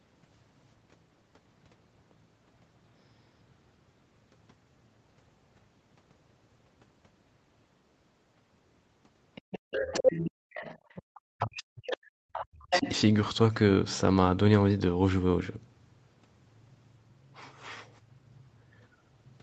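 From 9.35 to 11.2 s, a second voice sits about 10 dB under the talker. This is the other side's voice leaking through. It likely comes from the loudspeaker, with the echo canceller leaving a residue in the microphone.

From 9.5 to 9.71 s, the background is gated by the echo canceller. The room sound drops by about 31 dB for around 150 ms. The canceller clamped the microphone while the loudspeaker played, then released it.

From 10.29 to 10.34 s, the talker's speech is suppressed in double talk. It cuts out for a brief moment, falling by roughly 40 dB. The likely cause is the canceller mistaking the talker for echo.

From 10.78 to 11.05 s, the background is gated again. The room sound dips by about 26 dB, then returns.

From 11.33 to 12.87 s, the speech is suppressed in double talk once more. For about one and a half seconds, the talker's voice dips and breaks up. The loss reaches roughly 40 dB at its deepest. 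Inside that stretch, the other voice leaks through again. It comes as a scrap at 11.89 to 11.97 s, about 10 dB down. It returns from 12.33 to 12.9 s, now only about 5 dB under the talker.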